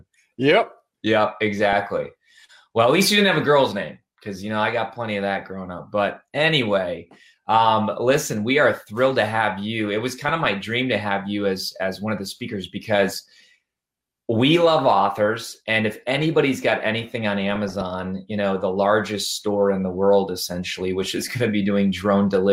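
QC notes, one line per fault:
1.66–1.82 s, 8.13–8.29 s, 10.12–10.45 s, 14.79 s, 17.47–17.82 s, 21.01–21.29 s: DAB burbling. Short blips of noise in single sub-bands over the audio. Residual bit errors, at a rate of a few tenths of a percent, corrupt MP2 samples and scale factors, so individual sub-bands jump in level for up to a frame.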